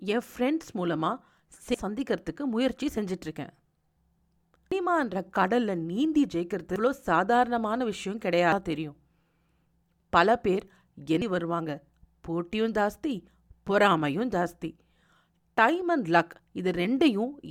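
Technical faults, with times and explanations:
1.74, 4.72, 6.76, 8.52 and 11.22 s: compressed frames skipped. At each point the speech jumps forward, losing roughly 0.7 s at most points and about 0.4 s at 4.72 s. The gaps are consistent with dropping whole frames of about 92.9 ms, several to around ten at a time, that were missing or rejected as corrupt by the decoder.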